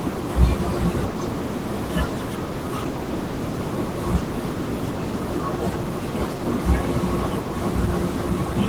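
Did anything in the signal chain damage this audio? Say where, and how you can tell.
Yes. The damage happens at the codec stage, from Opus voice compression running in hybrid mode for the whole clip. The SILK coder handles the band below 8 kHz and a CELT layer covers the rest, with content reaching about 20 kHz. The excitation is coded coarsely throughout, which points to a low bitrate of around 16 kbps. The speech sounds plainly hoarse and slightly robotic from start to finish, even though the bandwidth is not narrowed.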